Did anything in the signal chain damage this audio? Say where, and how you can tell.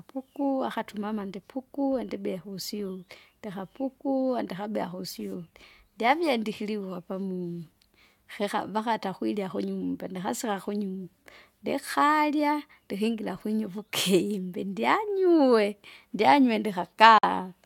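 Yes. Near the end, at 17.18 to 17.24 s, the speech cuts to silence with abrupt or briefly faded edges, then resumes further along, as if it had played on through the hole. This is likely a Bluetooth dropout: roughly 46 ms of audio, consistent with two packets, missed the playback deadline on the wireless link and was discarded.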